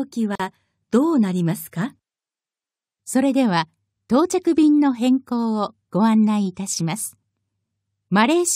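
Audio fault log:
0.35–0.40 s, gap at a join of encoded pieces: the speech drops out for about 43 ms and then resumes exactly where it left off, with nothing lost. The codec smears the edges of the silence, so it sounds like a brief hole punched into continuous sound. It fits two separately encoded segments butted together untrimmed, leaving the first encoder's end-frame padding and the next one's start-up delay in the stream.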